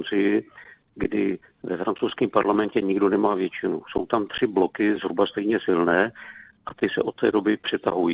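The sender's audio clock runs about 3 percent slower than the receiver's, so this clock drift between sender and receiver leaves the receiver's jitter buffer steadily short of audio for the whole clip. To keep playback going, the receiver fills the gap by repeating short slices of sound. These repeated timing corrections run from 0.17 s to 7.62 s, all in the same lengthening direction and unevenly spaced. Together they add roughly a fifth of a second, so the sound plays at about 97 percent of its proper pace. The audio arrives through a narrowband call path with nothing above 4 kHz, which fits G.711 telephone coding, and that bandwidth limit is audible throughout the clip.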